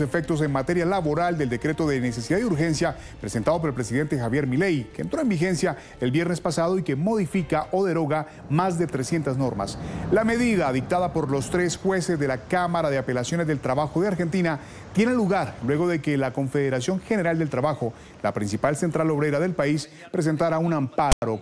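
At 21.12 s, right at the end, a short burst of static cuts in and runs to 21.22 s, about a tenth of a second. This is file tags played as audio. A block of text tags was decoded as if it were sound samples. The character bytes come out as a loud, harsh rasp, pushed off to one side of zero. Zero padding after the text then drops to dead silence. Both edges are abrupt and hard.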